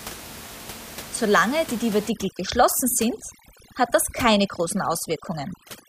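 From 2.10 s to the end, overdone noise removal sets in: bands near the noise estimate are cut away, so the room noise, about 16 dB below the speech, collapses into twinkling specks, unlike steady codec smearing.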